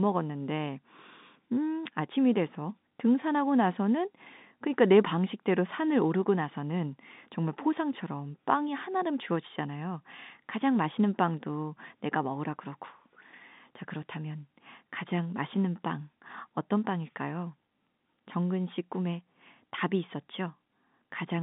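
Nothing here counts as a fault: the speech comes over an ordinary G.711 telephone line, so it sits in the usual narrow band of roughly 150 Hz to 3.7 kHz with nothing above 3.8 kHz, which is just how a phone call sounds.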